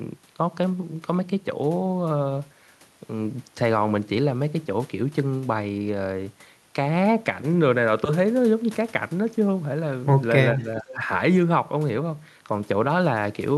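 From 10.55 to 11.0 s the speech sinks sharply, falling by roughly 15 dB and thinning out in patches for a little under half a second before recovering. This is most likely speech suppressed in double talk: with both ends talking at once, the echo canceller could not tell this talker apart from the returning loudspeaker echo, so it pulled down the whole signal. The call path carries the audio with content up to about 12 kHz.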